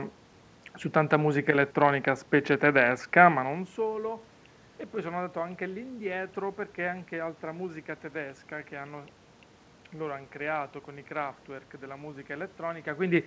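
Nothing here counts as a fault: the room's background noise and the level shifts near 3.5 s and 13 s as the talker moves belong to the recording itself, and the top end stopping at 8 kHz is just what a G.722 call link does.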